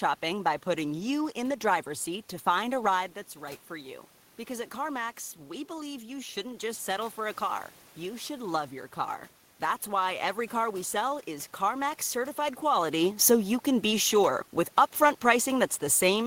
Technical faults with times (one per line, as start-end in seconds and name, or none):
3.33-7.14 automatic gain rising